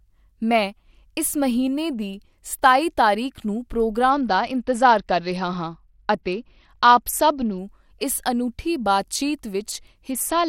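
From 4.10 s to 7.58 s, right after "ਦੀ ਸਤਾਈ ਤਾਰੀਖ ਨੂੰ", the speech shows a Bluetooth SBC bit pool drop: the link starved, the encoder cut its bit budget, and the treble dulls while a gritty grain rises, which fits a fall from bit pool 31 to 9, around 72 kbps. A spectrogram shows the upper bands going bare in blocks. The same drop returns at 10.11 s and runs to the end.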